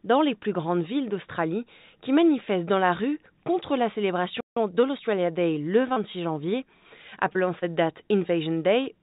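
The audio arrives over a narrowband call path with nothing above 4 kHz, which points to G.711 A-law at 64 kbps, and it carries three kinds of fault. At 4.40 s the sound stops dead mid-flow and stays silent for about 0.16 s, to 4.57 s. This is a playback stall, most likely caused by the player's buffer running dry or its output thread being held up, so nothing was sent to the output until it recovered. Right after, from 4.57 s to 5.19 s, the audio runs hurried at 1.25 times normal speed with its pitch unchanged. This is time-compressed catch-up: to work off the backlog built up during the stall, the player drops small slices of audio and cross-fades across the joins. Later there are three brief smears, at 5.93 to 5.99 s, 7.33 to 7.38 s and 7.59 to 7.65 s. These are short concealed packet losses. Each time about 30 ms of audio failed to reach the decoder in time, and the receiver filled roughly 20 to 30 ms of it by extending the preceding sound before blending back into the real signal, which is why a brief transient can smudge or disappear at those points.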